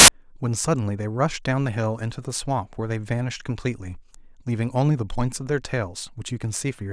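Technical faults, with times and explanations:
0.00–0.08 s, file tags played as audio: embedded cover-picture data read as samples gives a hard-edged burst of very loud white noise, unlike a single click or dropout.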